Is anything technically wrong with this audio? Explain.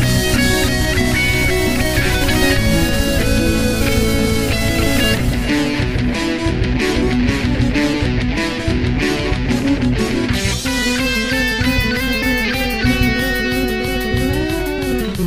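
Yes. There is damaged data in a compressed stream at three points: 2.26 to 2.30 s, 7.91 to 7.94 s, and 12.19 to 12.23 s, each about 40 ms. Corrupted bytes make the decoder misread frames and lose sync, briefly disrupting the audio. On a spectrogram or waveform, each event appears as a narrow vertical break in the surrounding pattern.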